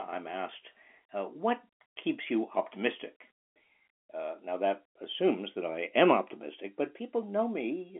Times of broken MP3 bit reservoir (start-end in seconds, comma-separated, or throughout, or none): none